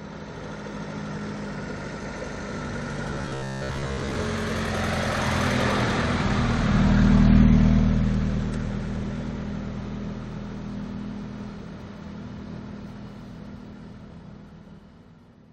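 From 3.11 to 4.16 s, robotic sound from repeated short buffers. A rigid metallic buzz near 67 Hz appears. Most of the audio there is likely replaced by repeated 15 ms slices.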